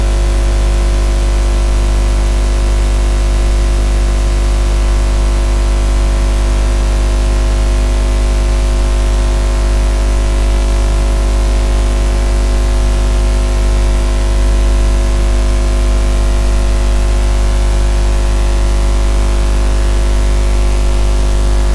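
No faults are audible anywhere in this recording of sounds.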